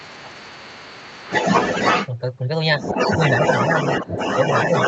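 A speech clip in which the echo canceller likely failed to remove the far end's loudspeaker playback from the microphone, so the other side's voice leaks through at about the same level as the talker from 0.0 to 2.1 s and again from 2.77 s to the end. Between 0.1 and 0.44 s, both sides talking at once likely confused the canceller into turning everything down, so this is speech suppressed in double talk: the talker's voice dips, by up to roughly 15 dB, for most of that stretch.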